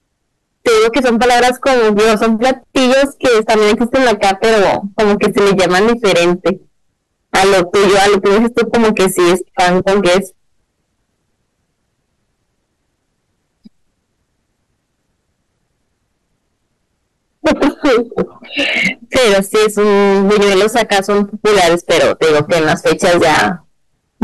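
Speech with hard clipping throughout: overdriven about 26 dB, nearly a third of samples flatten, giving a constant harsh fuzz rather than softer, rounder saturation.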